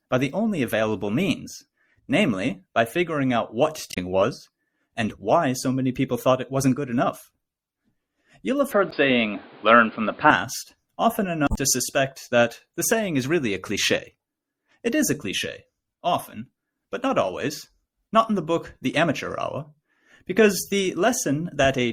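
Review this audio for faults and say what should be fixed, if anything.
Throughout, the speech has a watery, swirly texture with blurred consonant attacks, likely from MP3 compression at a low bitrate, around 64 kbps. A spectrogram shows a flat treble ceiling and flickering high-frequency patches. To prevent this, encode at a higher bitrate or keep a lossless master.

Damaged data in the compressed stream causes short squawks and blips at 3.90–3.98 s, 8.88–8.93 s and 11.46–11.58 s, where the decoder loses frame sync and searches for the next frame header. The waveform shows abrupt discontinuities, and the spectrogram shows vertical smeared bursts. To prevent this, check stream integrity, for example with checksums and reliable transport, before decoding.

From 8.72 to 10.31 s the sound turns dull and boxy with no gap at the change, which suggests the input switched to a poorer device. Nothing passes above 4.9 kHz, the level shifts by about 5 dB, and a new noise floor sits roughly 30 dB down. 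A spectrogram shows the top band abruptly cut off, then restored. To prevent this, lock the recording input so the system cannot switch devices during capture.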